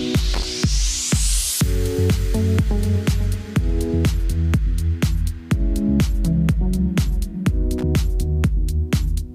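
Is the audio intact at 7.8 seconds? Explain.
No. At 7.78 to 7.83 s a loose connector crackle breaks in: a worn or dirty contact somewhere in the signal path shifts and rapidly makes and breaks the connection. Each break chops the signal off and on, and any DC sitting on the line adds pops as contact is lost and regained. What reaches the ear is a brief, irregular burst of crackle and scratching lasting about 46 ms, laid over the audio at that instant.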